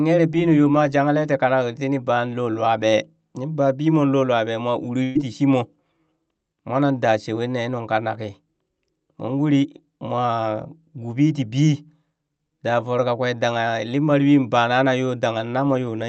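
At 5.03 s the speech turns briefly into a held, fading sound for roughly 0.15 s, then jumps straight to "tii shimo" with a small stretch of audio missing and no true silence in between. This is a burst of packet loss: several consecutive packets never arrived in time, so the receiver stretched the last sound it had over the gap, about 120 ms, and faded it down before resuming. The audio above 8 kHz is absent throughout, which fits a call codec running at a moderate bitrate.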